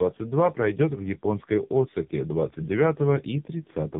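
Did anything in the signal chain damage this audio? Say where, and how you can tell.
Yes. The damage happened at the codec stage, through tandem speech coding: the sound points to two low-rate narrowband coder passes in a row, each re-encoding the previous one's errors. From start to end, nothing sits above 3.8 kHz, and the speech sounds rough, muffled and warbly.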